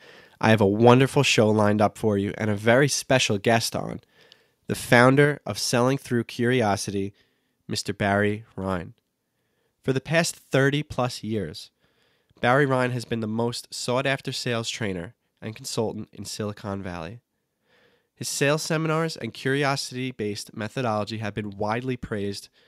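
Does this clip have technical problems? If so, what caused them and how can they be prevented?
Yes. The speech suddenly drops about 2 dB at 1.02 s, between "I have a" and "show lined up for", then about 4 dB at 5.25 s. This is likely a microphone volume stepped down by the call software reacting to a hot input. To prevent it, set a moderate input level beforehand and turn off automatic microphone volume adjustment.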